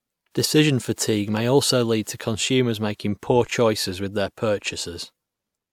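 No technical faults can be heard anywhere in the speech recording.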